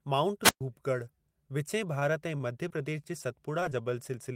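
A wireless microphone squelch dropout at 0.42 to 0.61 s opens this speech clip's faults: the radio link faded, hiss rose, and the receiver's squelch muted the output for about 120 ms before the signal came back. Short stalls from late packets follow at 1.99 to 2.11 s and 2.38 to 2.42 s. Each time the jitter buffer ran dry, so the receiver held the last sound for about 21 ms until the packet arrived, then resumed without losing anything. Short concealed packet losses come at 2.68 to 2.72 s, just before "प्रदेश जे", and at 3.60 to 3.63 s and 3.70 to 3.73 s, after "प्रदेश जे". Each time, 20 ms of audio never arrived, and the decoder bridged the gap by extending the preceding sound, leaving a brief smear.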